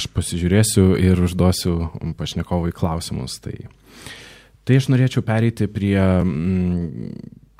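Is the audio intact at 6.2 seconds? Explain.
No. At 6.21 s there's a block of digital silence, a gap of about 2.9 ms, which fits a 128-sample buffer that wasn't filled in time and got zeroed. The speech drops straight to silence and back with no fade, so it comes across as a tick.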